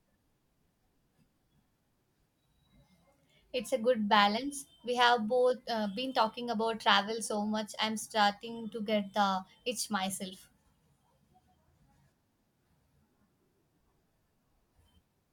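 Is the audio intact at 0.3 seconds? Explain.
Yes, the audio is intact at 0.3 seconds, with no fault present at that moment.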